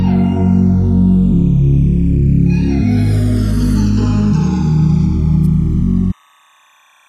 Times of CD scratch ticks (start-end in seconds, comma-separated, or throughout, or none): none